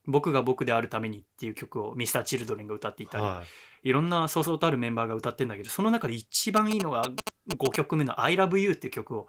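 From 6.57 to 7.76 s, GSM signalling bursts break in: a nearby 2G phone's radio pulses are rectified by the audio circuit into a galloping dit-dit-dit of short 217 Hz buzzes at roughly the speech's level. Unlike steady mains hum, they come in clustered stutters and then stop.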